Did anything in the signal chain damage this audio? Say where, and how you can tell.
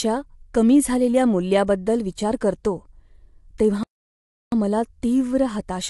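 Yes. At the codec stage the whole clip sounds rough and grainy, with noise filling in between the harmonics and nothing above 11.6 kHz. That's likely low-delay AAC compression (AAC-ELD): its short frames resolve pitch poorly, and the damage fits a bitrate around 32 kbps.

There's also a playback stall, with the speech cutting out dead from 3.83 s to 4.52 s, roughly 0.69 s of silence, before resuming at "मला तीव्र". The output most likely ran dry or its playback thread got blocked, so nothing reached the output until it recovered.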